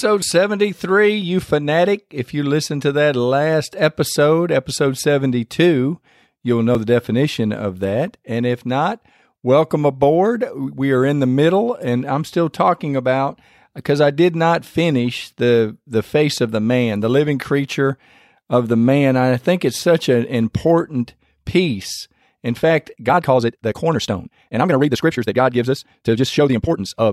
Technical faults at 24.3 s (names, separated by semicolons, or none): time-stretched section